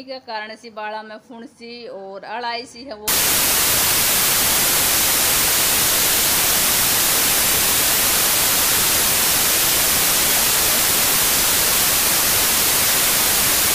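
Wrong sample width runs from 3.08 s to the end at 13.74 s. The sound points to 32-bit samples read as packed 24-bit ones, so bytes from neighbouring samples merge into loud noise burying the original, which plays at 0.75 speed and lower pitch.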